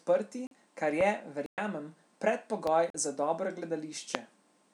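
A speech recording with two kinds of fault. There are three blocks of digital silence, at 0.47–0.51 s, 1.46–1.58 s and 2.90–2.94 s. The speech drops abruptly to silence and returns with no fade. The two short gaps last about 43 ms, which fits a missed 2048-sample buffer. The 117 ms gap is long enough to hear as a short hole. There are also three loud pops, at 1.01–1.03 s, 2.67–2.69 s and 4.15–4.17 s. Each is a single sharp burst over the continuing speech. The first two peak about 15 dB above the signal and the last about 20 dB. A sudden voltage spike, from a connector, static or a driver glitch, is the likely cause.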